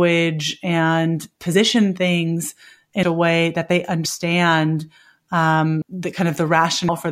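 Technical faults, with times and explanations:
1.53, 3.02, 4.04, 5.81 and 6.88 s, compressed frames skipped: at each point the speech jumps forward, losing roughly 50, 300, 100, 200 and 200 ms, whole frames of 23.2 ms each. Those frames were missing or rejected by the decoder. On a spectrogram, harmonic tracks shift abruptly; the waveform envelope shows a sudden discontinuity with no gap.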